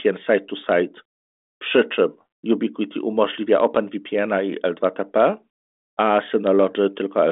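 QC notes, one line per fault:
No faults found in the speech. The G.726 telephone path at 40 kbit/s is audible as a narrow line band of roughly 250 Hz to 3.6 kHz with nothing above 3.8 kHz, and its coding leaves at most a faint trace.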